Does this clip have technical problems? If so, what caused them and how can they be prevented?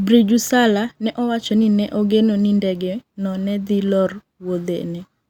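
No, there are no technical problems to report in this speech recording. With nothing at fault, there is nothing that needs preventing.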